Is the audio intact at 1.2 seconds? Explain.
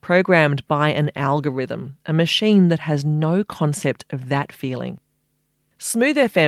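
Yes, the speech plays through cleanly at 1.2 seconds, with no dropout, click, distortion or other fault at that point.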